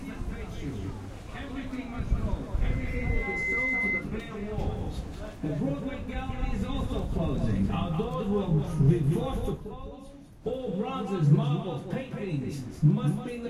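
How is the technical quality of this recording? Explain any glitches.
The recording has one clear glitch, a burst of loudspeaker feedback squeal from 2.65 s to 4.07 s. A microphone was picking up a loudspeaker that it was itself feeding, and at 2.1 kHz the round trip through that loop gained more than it lost. The tone fed on itself, swelling over about a second into a steady, piercing whistle roughly as loud as the rest of the sound, until it stopped.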